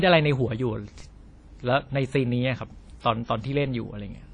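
WMA compression runs through the whole speech clip, from start to finish. The sound has plainly audible codec damage, with nothing above 10 kHz. This points to a transform codec, likely WMA, running at a low bitrate around 32 kbps. At that rate the encoder quantises each long block coarsely and drops weak spectral lines, so the error spreads over tens of milliseconds. The result is a ringing, washy texture around the speech, with a hiss that rises and falls with it.

A DC step occurs at 1.00 s and again at 3.66 s. At each moment the waveform's zero line jumps suddenly, as happens when a converter recalibrates or an input carrying an offset is switched in. The offset then decays away, as if passing through a 20 Hz high-pass. Each jump is heard as a low thump or click, while the speech carries on unchanged across it.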